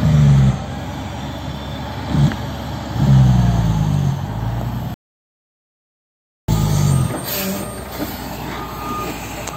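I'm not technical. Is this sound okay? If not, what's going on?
No. At 4.94 seconds the sound cuts out mid-flow and stays silent for about 1.5 seconds, coming back at 6.48 seconds. This is a playback stall: the player likely ran short of data or got held up, so it went quiet until it caught up.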